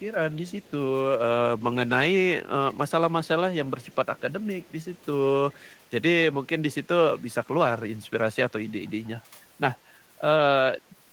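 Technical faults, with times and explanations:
0.0–0.04, 0.48–0.71, 2.72–2.91, 3.81–4.21, 4.65–5.05, 5.52–5.72 and 8.87–9.08 s: echo leak. A faint copy of the speech trails the original by 115 ms, sitting roughly 30 to 35 dB below it, likely because a loudspeaker on the far side fed its microphone and the echo canceller let some through. On a spectrogram, weak duplicate harmonic traces appear shifted right of the speech; the waveform shows a low-level ghost envelope lagging each burst.
9.23–9.34 s: background gated by the echo canceller. Just after the last echo leak, the room sound dips by about 9 dB for around a tenth of a second, then recovers. The canceller clamped the microphone down while loudspeaker audio was playing, pulling the background noise with it. A spectrogram shows a brief vertical gap in the broadband noise floor, and the waveform shows a short notch in the background level.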